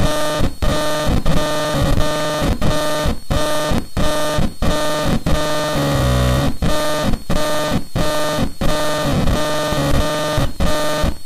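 No technical faults are audible.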